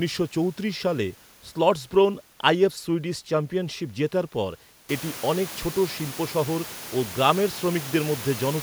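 Speech recording with no technical faults; the background noise in the room, part of the recording itself, rises by about 18 dB from around 5 s and then sits about 16 dB below the speech.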